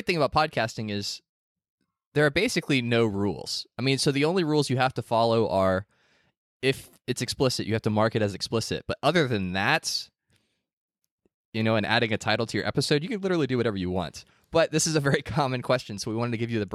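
No technical faults can be heard anywhere in this speech recording. Nothing in the signal chain calls for comment.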